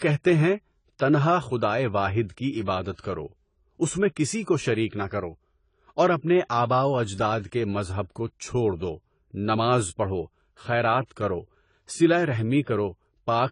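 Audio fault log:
Throughout, AAC compression: speech sounds dull and smeared with nothing above 10 kHz, likely from AAC-LC coarsely quantising at a low bitrate, which fits about 24 kbps.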